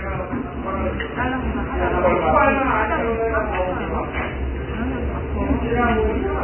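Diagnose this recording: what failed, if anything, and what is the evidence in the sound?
Codec stage, likely Vorbis compression: hissy, grainy audio throughout, nothing above 3.1 kHz. A spectrogram shows a flat ceiling, with speckled noise replacing treble detail.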